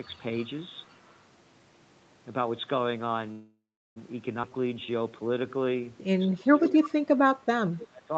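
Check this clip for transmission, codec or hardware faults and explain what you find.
Several transmission faults are present: leaked echo, a freeze, a skip, a slowed stretch and suppression during double talk, all riding on the Opus call path with its 8 kHz bandwidth.

Echo leak, 0.02–0.18 s, 0.89–1.16 s and 6.69–6.89 s: the far side's echo canceller likely let loudspeaker pickup through, which was sent back. A copy of the speech follows about 210–230 ms behind, around 35–40 dB down early but only about 15 dB down at 6.7 s.

Call audio freeze, 3.31–3.98 s: delayed packets emptied the jitter buffer, and the receiver likely stretched the last sound into a fading buzz, then roughly 350 ms of silence. The speech resumes where it stopped, with nothing lost, only 647 ms late.

Skip ahead, 4.42–4.45 s: a stretch was dropped, on the way or by the jitter buffer, while later packets waited, so playback jumps forward almost seamlessly. 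Roughly a fifth of a second of speech is gone, and the two sides of the cut butt together.

Jitter buffer slow-down, 4.49–5.82 s: running low, the buffer repeated single pitch periods to rebuild its reserve, adding 184 ms. The speech plays at 87% speed with unchanged pitch, so sounds drag out and may warble slightly.

Speech suppressed in double talk, 6.27–6.80 s and 7.12–8.12 s: with both sides talking, the echo canceller likely could not tell local speech from echo and attenuated everything. The talker dips by up to about 30 dB, thinning or breaking up in pieces.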